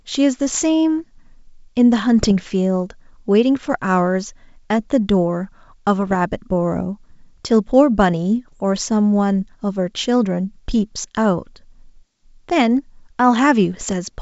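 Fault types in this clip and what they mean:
Bit errors on an ADPCM link: Flipped bits derail the decoder's step size. Five brief rough bursts and pops follow, none over 0.2 s.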